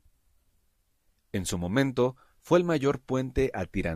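No technical faults are audible.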